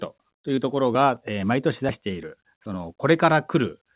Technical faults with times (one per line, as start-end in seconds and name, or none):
0.56-0.59 short concealed packet loss